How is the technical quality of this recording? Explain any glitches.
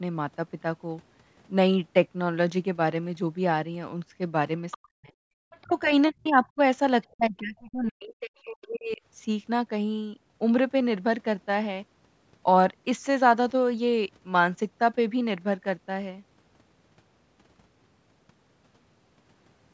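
The speech has echo trouble between about 4.7 and 9.0 s, in two linked kinds.

Other side's voice leaking through, at 4.71–4.78, 5.50–5.82, 6.24–6.29 and 7.02–7.12 s: faint foreign speech roughly 15 to 40 dB below the talker, likely loudspeaker echo the canceller missed. A spectrogram shows weak, separate harmonic streaks.

Speech suppressed in double talk, at 4.78–5.13, 5.64–5.92, 6.12–6.59 and 7.12–9.01 s: the talker dips by as much as about 40 dB, likely because the canceller ducked everything during simultaneous speech. The waveform shows sudden hollows, and the spectrogram shows faded bands below the normal 8 kHz ceiling.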